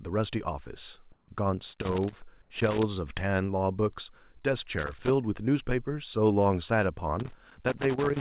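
Speech, carried over a narrowband call path where nothing gets above 4 kHz, which fits G.711 A-law at 64 kbps. The background drops out twice and gets replaced by a flat, featureless hiss: from 1.12 to 1.28 s (about 160 ms) and from 2.42 to 2.50 s (about 80 ms). That's most likely comfort noise in place of the background. The sender's voice detector decided nothing was being said and stopped transmitting, and the receiver filled the gap with synthetic noise shaped roughly like the room. The background is sitting quite low here, about 31 dB and about 38 dB below the loud parts, and the fill barely shifts the level (about 1 dB on the first, none on the second), so what gives it away is the texture going dead. Loose connector crackle shows up in three irregular bursts of scratchy noise: 1.70 to 2.83 s, 4.73 to 5.10 s, and 7.20 s right through to the end. That's a worn or dirty contact making and breaking as it moves, chopping the signal and popping wherever there's DC on the line. 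Between 4.42 and 4.45 s there's a short concealed packet loss. About 20 ms of audio never made it to the decoder, and the receiver patched the hole by stretching out the preceding sound before easing back into the real signal. The result is a brief smear in the sound.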